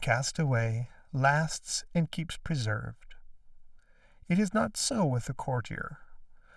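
Channel delay (comb filtering) runs throughout: one channel lags about 1.5 ms before mono summing, so spectrogram notches repeat evenly from around 400 Hz, leaving the speech hollow and phasey.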